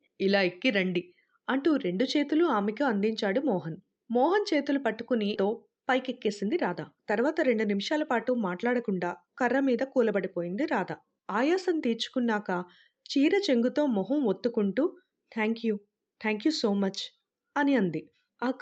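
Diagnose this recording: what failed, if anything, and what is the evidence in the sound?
At 5.35 s the speech jumps forward with no gap and no fill. Roughly a second of talk is simply missing, and the sounds on either side are butted together. This is a skip ahead at the network and jitter-buffer stage. Audio that arrived late or overflowed the buffer was discarded while newer packets were already queued, so playback resumed from the later material and the receive delay shrank by about a second in one step.

From 5.45 s to 11.07 s the talk runs noticeably hurried, about 7% fast, yet the pitch stays where it was. This is a jitter buffer speed-up. After a burst of delayed packets the buffer held more audio than its target, so the receiver repeatedly cut out short pieces one or a few pitch periods long, around 0.4 s in total, to bring latency down. Throughout, the Opus call path sounds band-limited to about 8 kHz.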